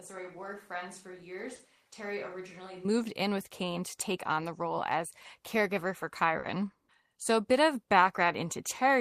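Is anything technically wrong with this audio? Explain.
Yes. From the very start until about 2.85 s, just before "in with", the speech sounds roomy and hollow, thin in the bass, about 10 dB quieter, with room noise only about 30 dB below it. It then snaps back to a close, full sound. This is likely a switch to a distant microphone: the close microphone's signal was missing for that stretch, so a microphone further away captured the reverberant room along with the voice.

At 1.55 to 1.62 s, and again at 6.39 to 6.46 s just after "role as caregiver for", there is a brief smear or wobble lasting a few hundredths of a second. Both are short concealed packet loss. In each case about 40 ms of audio never arrived in time, and the receiver bridged the gap by extending the preceding sound before blending back into the real signal.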